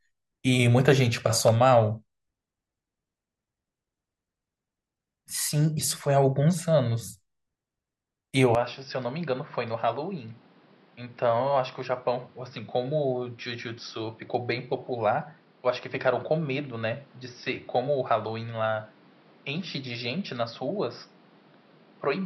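Speech that abruptly turns duller and a few dB quieter at 8.55 s and stays that way to the end, with nothing above 5.8 kHz and new background noise roughly 30 dB down, no gap at the change: likely an input switched to a poorer device.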